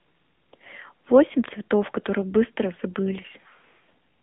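Speech runs through the AMR narrowband mobile codec for its whole length. The band is held to about 200 Hz to 3.5 kHz and nothing passes above 3.6 kHz, so the sound is thin and boxed-in. The plainly audible buzzy, synthetic coding damage fits a low rate near 8 kbps. On a spectrogram, energy stops at a flat ceiling around 3.6 kHz with an empty region above, and the low end is thinned below 200 Hz.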